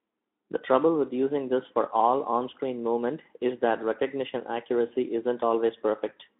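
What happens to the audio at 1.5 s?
Nothing goes wrong at 1.5 s; the speech continues intact through that moment, carried as before by the Speex codec's narrow telephone-style band.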